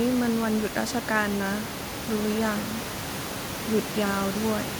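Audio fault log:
No faults detected in the speech; the room noise sits about 10 dB below it and belongs to the recording, not the system.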